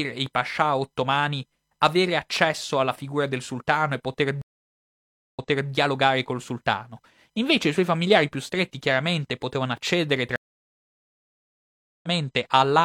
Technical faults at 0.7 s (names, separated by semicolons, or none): none